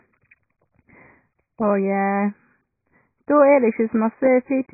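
A speech recording that sounds dull and boxed-in from start to finish, with nothing above about 2.5 kHz, so sibilants turn to a dim, fizzy smear and sustained vowels carry a watery warble. This points to heavy AAC compression, likely AAC-LC at a very low rate that fits roughly 12 kbps, where the encoder cuts the top of the spectrum and starves the remaining frequency lines of bits, leaving gaps and swirling artefacts across the whole clip.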